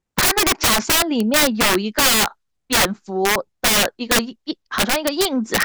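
A gain or mixing stage pushes the speech about 13 dB past the integer ceiling, and instead of saturating, the arithmetic wraps: every sample that exceeds the limit flips to the opposite extreme of the range. This is integer overflow, present throughout. Roughly 7 percent of samples go over, so each louder syllable breaks into violent cracks and snaps, far harsher and more abrupt than ordinary clipping, while quieter passages stay intact.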